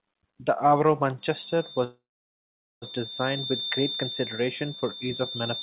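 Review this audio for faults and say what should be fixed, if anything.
A feedback whistle enters at 1.19 s and runs to the end of the clip: a thin, steady 3.6 kHz tone about 10 dB below the speech, swelling and fading slowly in level. The likely cause is a loudspeaker-to-microphone loop sitting just at the edge of feedback, ringing without running away. On a spectrogram it is a single bright horizontal line just under the 4 kHz ceiling of the G.711 call band. To prevent it, enable acoustic echo cancellation, lower the playback gain, or have the far end use a headset.

A call audio freeze occurs from 1.84 to 2.84 s. The last sound is stretched into a fading buzz or hiss, and then about 0.82 s of silence follows. The speech then resumes with nothing lost, but it now runs roughly 0.98 s late. The likely cause is packets held up in transit until the jitter buffer ran dry. On a waveform this shows as a decaying smear followed by a flat line. 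On a spectrogram it appears as repeated, blurred frames and then a blank gap. To prevent it, fix the network delay spikes and allow the jitter buffer more headroom.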